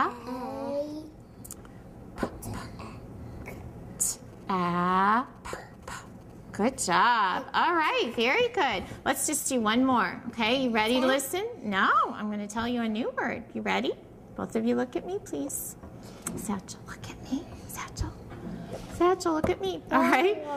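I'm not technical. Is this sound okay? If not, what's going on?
No. GSM signalling bursts from 4.18 to 6.79 seconds: a nearby mobile phone's radio pulses leaked into the audio circuit, causing a quiet galloping tick-and-buzz.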